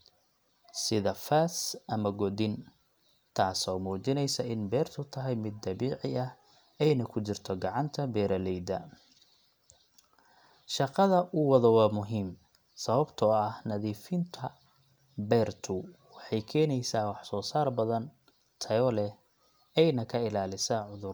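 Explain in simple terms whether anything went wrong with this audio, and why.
Sample clock jitter runs through the whole recording. The converter's timing wobbled slightly, so loud, bright speech sounds pick up a faint, rough hiss.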